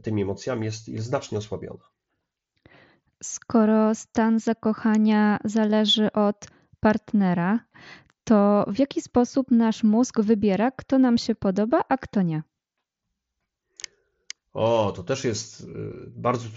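No technical faults can be heard in the speech, which comes through the Bluetooth mSBC headset codec at its usual wideband limit of 8 kHz.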